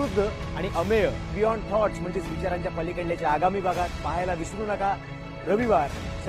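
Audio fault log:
1.44–6.29 s, adaptive stream at a lower bitrate: the stream switched to a lower-bitrate version until the end, so the quality abruptly drops and codec artefacts rise, with no gap. This fits a step down from roughly 64 to 16 kbit/s.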